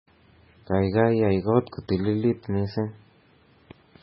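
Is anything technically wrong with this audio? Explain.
Yes. MP3 compression throughout: the speech stops dead at 5.6 kHz and sounds heavily watery and swirly, likely from a starved encoder near 16 kbps dropping treble and weak components.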